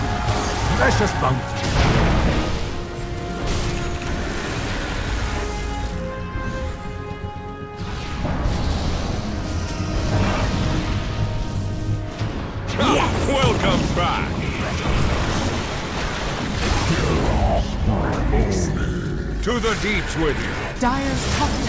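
No technical faults can be heard anywhere in the clip. It has passed through a call path whose band stops at 8 kHz, which fits a wideband codec such as G.722.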